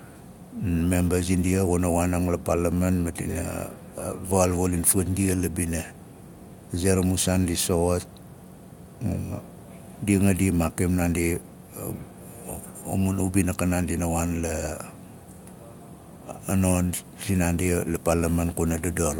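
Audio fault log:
No audible fault in this speech clip.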